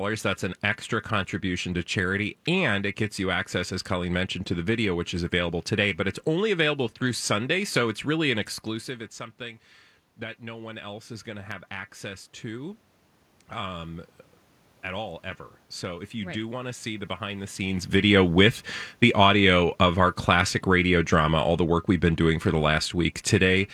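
From 18.06 s to 23.69 s the automatic gain falling fault is audible: the gain control judges the input too loud, or its background noise too strong, and pulls its gain down gradually, by about 4 dB over those five and a half seconds. Because the reduction is applied to the whole signal, the speech and the room noise beneath it sink together. Level shifts from the talker moving, around 8 s and again shortly before 18 s, are acoustic and not part of the fault.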